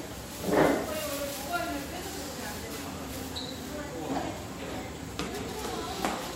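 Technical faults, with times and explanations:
5.27–5.49 s, frames out of order: two adjacent blocks of about 104.5 ms each were decoded in swapped sequence, so the second half of this stretch plays before the first. The result is a brief garbled flutter. Each block's length fits a run of four codec frames. Nothing is dropped, so overall timing is unchanged.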